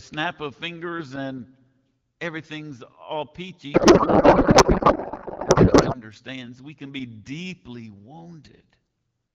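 From 3.73 to 6.02 s, a codec payload misread: octet-aligned AMR bits decoded as bandwidth-efficient, so the speech becomes garbled warbling noise, smeared broadband on a spectrogram.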